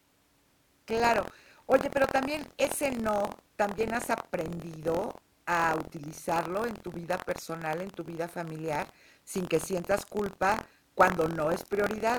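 Throughout, the writer and reader of the audio ring buffer have slipped, causing buffer tearing: a small slice of each period replays audio about 70 ms old, producing a constant robotic 43.1 Hz buzz under the speech, which fits a 1024-sample buffer.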